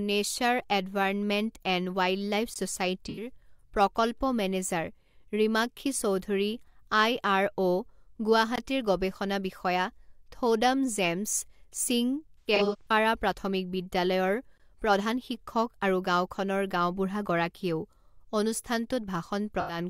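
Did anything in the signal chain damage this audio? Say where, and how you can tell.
Yes. Hard-edged 20 ms holes interrupt the speech at 2.54, 8.56 and 14.58 s, exactly 6 s apart. This is a gap between chunks, where playback or storage joins each chunk late.

Smeared, phasey patches at 3.09–3.29, 12.38–12.91 and 19.59–19.79 s point to AAC frame loss with concealment. The codec decoder rebuilt the missing frames from the last good spectrum.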